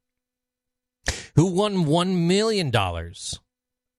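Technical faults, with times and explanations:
No technical faults are audible anywhere in this speech recording.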